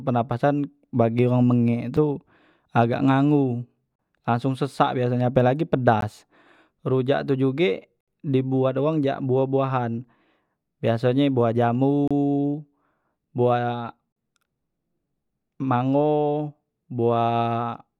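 Speech, broken by a gap between stream segments. Short hard-edged silences land at 1.97 s, 3.96 to 3.99 s, 6.01 s, 8.01 to 8.08 s, 12.08 to 12.11 s and 14.12 to 14.16 s. They last 5 to 70 ms. They follow 2-second segment boundaries, where timestamps leave holes filled with silence.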